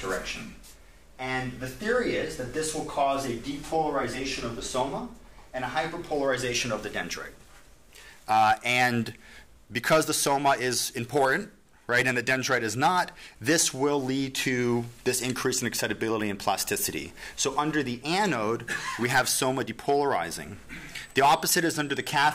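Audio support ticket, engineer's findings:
USB whine, 20.97 s to end of clip (22.35 s). Steady 8 kHz tone, roughly 30 dB below the signal. Probable source: USB interface, with 125-microsecond microframe current draw coupling through power or ground. Not mains hum, which sits at 50/60 Hz and harmonics. Not coil whine, which drifts with load. Pitch locked exactly to the microframe rate.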